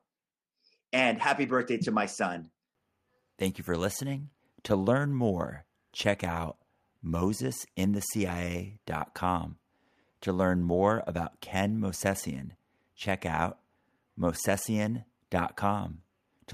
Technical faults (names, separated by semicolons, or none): none